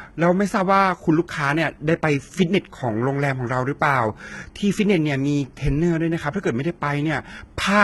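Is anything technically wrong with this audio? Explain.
Yes. Throughout, the speech's s sounds are heavily gritty and metallic, with nothing above 11.8 kHz. This is likely HE-AAC compression, which copies lower bands upward to fake the treble, consistent with a very low bitrate near 16 kbps.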